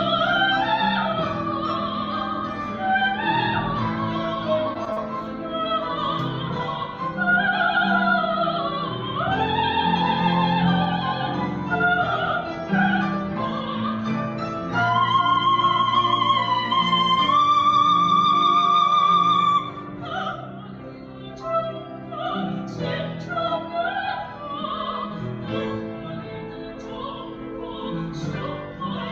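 Short concealed packet loss at 4.73 to 4.77 s: about 20 ms of audio never arrived in time, and the receiver bridged the gap by extending the preceding sound, rebuilt from its pitch or as shaped noise, for roughly 14 ms before crossfading into the real signal. It comes through as a brief smear or wobble, and a very short sound in that span can drop out.

Short stall from a late packet at 4.85 to 4.89 s: a packet missed its playout moment and the jitter buffer ran dry, so the receiver held the last sound for about 18 ms until the packet turned up, then resumed exactly where it left off. Nothing is lost, but the playback delay grows by those 18 ms, and the held moment has a faint buzz or dip.

Short concealed packet loss at 4.93 to 4.98 s: a longer hole of about 40 ms was filled with roughly 37 ms of synthesised continuation. It comes through as a brief smear or wobble. Together the three events make a stutter within about a quarter of a second.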